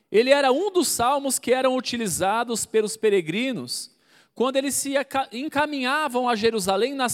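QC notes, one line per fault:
No technical faults can be heard anywhere in the signal.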